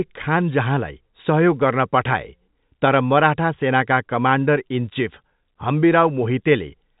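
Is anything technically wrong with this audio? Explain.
No, nothing is wrong: this is ordinary G.711 telephone coding, with the band stopping near 3.8 kHz as that format requires.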